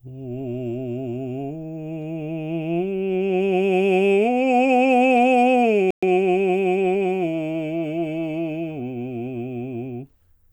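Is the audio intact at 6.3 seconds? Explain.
No. From about 6.0 to 7.2 s the music undergoes time-compressed catch-up. After a stall, the player clears its backlog by dropping small slices and cross-fading the joins, running at 1.1 times speed. Pitch holds, but the music sounds hurried. A spectrogram shows unchanged harmonic frequencies with onsets packed closer together.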